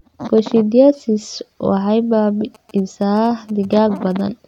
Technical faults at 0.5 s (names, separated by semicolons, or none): none